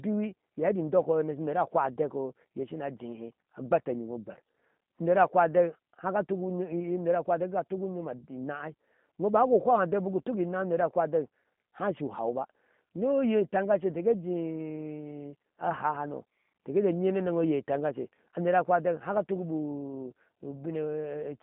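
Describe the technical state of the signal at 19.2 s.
At 19.2 s, as throughout the clip, G.729 codec damage is plain: speech rebuilt from filter and pulse models sounds rough and synthetic, band-limited to 150 Hz–3.6 kHz. The coding texture, not bandwidth loss alone, sets it apart from a plain telephone filter and fits an 8 kbit/s stream.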